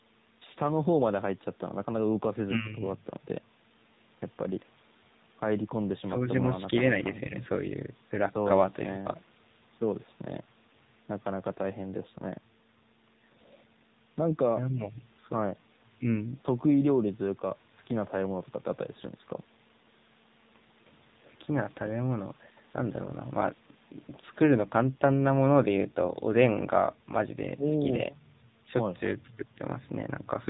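Throughout, the speech passes through the AMR narrowband mobile codec at 7.4 kbps, cutting everything above 4 kHz and leaving a plainly buzzy, synthetic, muffled voice.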